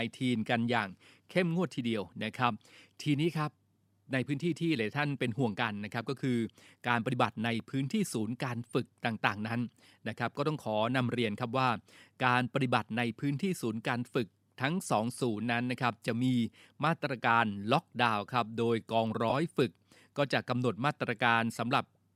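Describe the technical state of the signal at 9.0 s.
At 9.0 s the speech signal is intact, with no dropout, clipping or other fault, and only the light lossy compression that runs through the clip is present there.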